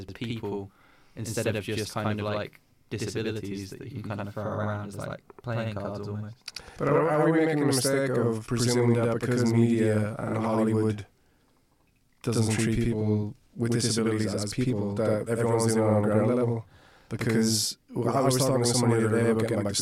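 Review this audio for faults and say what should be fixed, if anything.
Channel delay (doubling) runs through the whole speech clip. One channel arrives about 85 ms late, which fits a 4096-sample buffer. When the two channels are folded to mono, the late copy is heard as a distinct second attack at equal level, like a slapback behind every syllable. On the waveform, each transient appears twice, 85 ms apart, with matching amplitude. On a spectrogram, every onset shows a duplicate vertical edge at the same offset.

To prevent it, keep both channels aligned to the same buffer before summing, and check the mono fold-down for doubled onsets.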